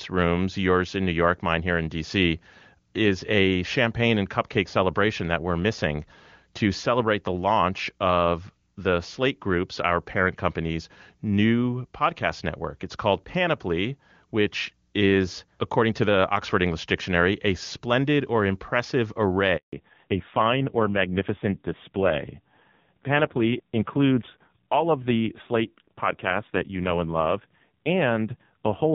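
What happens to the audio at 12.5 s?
Nothing goes wrong at 12.5 s; the speech there passes cleanly through the AMR wideband (HD Voice) path, at a rate that sounds like 23.85 kbit/s.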